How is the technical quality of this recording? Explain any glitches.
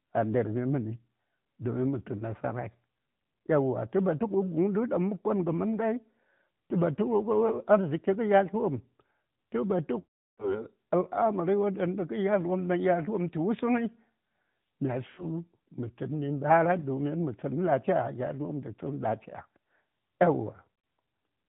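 The technical quality is limited by a narrowband mobile codec throughout, with four dropout glitches.

AMR narrowband mobile codec: Across the whole clip nothing above 4 kHz survives, and the speech has a plainly audible buzzy, synthetic edge. The vocal-tract model is driven by a pitch predictor and a few pulses per subframe, which fits the 10.2 kbps mode.

Lost AMR speech frames: At 7.48 s a brief dip comes from a single 20 ms loss. From 9.99 to 10.65 s about 380 ms is lost, so the decoder stretches the last good pitch and vocal-tract settings before fading to silence. Around 15.1 to 15.26 s a shorter run draws out the sound. At 20.74 to 20.90 s scattered losses cause brief dips.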